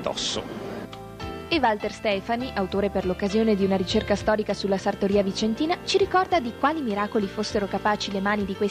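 No technical faults can be heard anywhere in this audio.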